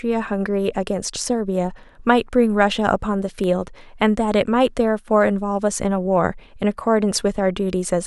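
At 3.44 s a block of digital silence, roughly 0.18 ms of silence, cuts the speech abruptly, giving a tick or dip; waveform shows flat line, spectrogram a thin vertical broadband stripe.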